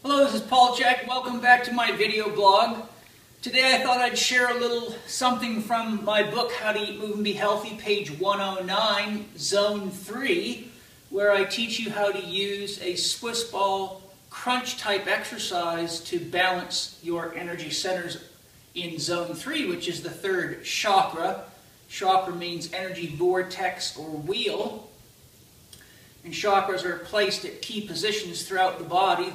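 At 1.08 s the level drops abruptly by about 6 dB, and again at 24.32 s by about 5 dB, with background noise falling in step. Each sudden gain jump likely comes from a gain setting applied between samples without a ramp.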